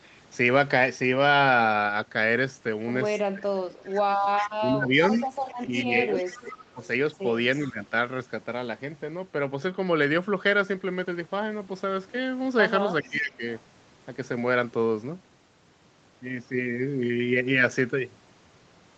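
At 3.33 to 3.7 s, 4.58 to 6.81 s, 7.65 to 7.92 s and 13.03 to 13.43 s the speech dips by up to about 20 dB, thinning or breaking up. This is speech suppressed in double talk, likely an echo canceller muting the near talker while the far side also spoke. Echo leak is heard at 5.14 to 6.7 s, 7.6 to 7.73 s and 13.03 to 13.6 s: a faint, delayed copy of the speech trailing by 397 ms, roughly 20 to 30 dB down, likely loudspeaker pickup that the canceller did not fully remove.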